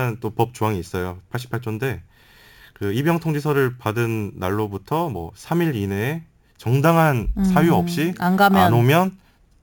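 From start to finish the speech carries imaging from sample-and-hold upsampling, consistent with audio raised from a 16 kHz rate to 44.1 kHz by simply repeating each sample, with no smoothing filter. The unfiltered steps leave mirrored copies of the spectrum, the first filling 8 to 16 kHz at about 23 dB below the speech, heard as a bright metallic fizz that rises and falls with the voice. Unlike aliasing, it appears above the original band, with some copies also falling inside it, and its lowest copy slides downward as the pitch rises.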